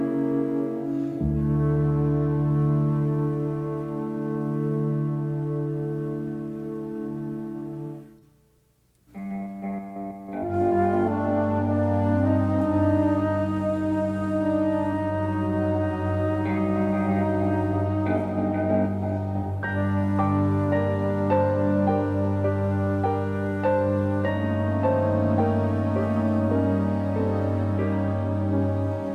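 No faults detected; nothing in the signal chain calls for attention.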